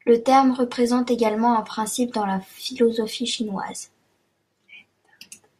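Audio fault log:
Nothing to log here: the speech comes through with no faults at all.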